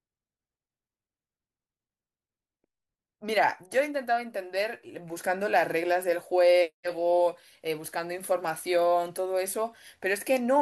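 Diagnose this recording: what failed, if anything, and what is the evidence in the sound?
Nothing failed; no stage shows a fault.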